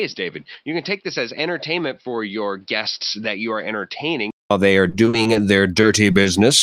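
From the start up to about 4.51 s the speech is dull and boxy, with nothing above about 5.7 kHz, a level roughly 10 dB lower, and a faint new noise floor sitting somewhere around 40 dB under the signal. Then there's a 200 ms silence and the sound opens up, just before "they are". That pattern points to an input switched to a poorer device, likely a headset's call profile or a second microphone, which passes a narrower band and brings its own tone and noise.

Right after "they are", from 4.89 to 5.37 s, you get repeated packet loss with that robotic, choppy quality. Five separate holes land in under half a second, the longest 40 ms, adding up to about 120 ms of invented audio, roughly a quarter of the stretch. Each gap gets patched by stretching the last bit of sound, and the next one hits before things settle, so it comes out with pieces chewed away.

Near the end there are three isolated short concealed packet losses, at 5.81–5.85 s, 6.11–6.15 s and 6.23–6.27 s, each filling about 20 ms. 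Here the decoder briefly continues the previous sound and blends back in, which you hear as a quick smear or wobble rather than sustained warbling. These sit on top of an Opus call path running at 32 kbps.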